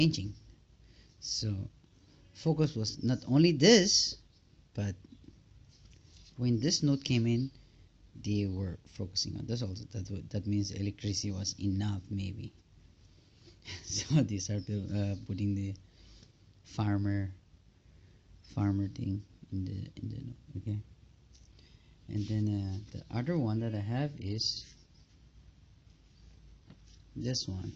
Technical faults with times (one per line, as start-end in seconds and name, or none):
23.77-27.75 adaptive stream at a lower bitrate